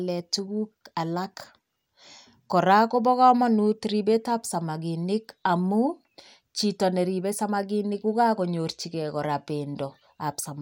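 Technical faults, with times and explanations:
Nothing technical stands out in this bit of speech; there's no fault to point to anywhere along the way.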